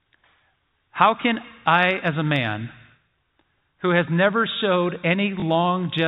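A single packet was lost at 5.40 to 5.42 s in this telephone-band speech, and the receiver filled the 20 ms gap by playing the previous packet again. That repeat is heard as a small blip. The G.711 telephone coding carrying the call keeps everything below 4 kHz.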